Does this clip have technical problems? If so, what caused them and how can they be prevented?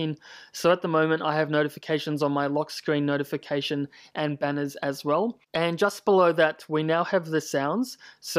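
No, nothing in this clip points to a technical fault, so there is no cause to trace and nothing to prevent.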